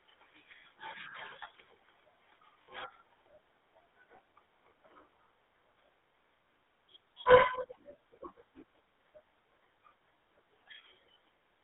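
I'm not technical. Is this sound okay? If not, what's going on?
No. The whole clip went through the GSM full-rate codec, an old mobile-phone coder. Speech sounds buzzy and gravelly, squeezed into a narrow 300 Hz to 3.6 kHz band. There are also lost GSM frames at 2.62–2.69 s, 4.16–4.19 s and 5.86–5.88 s, where the phone repeated the last good sound, giving brief metallic rings.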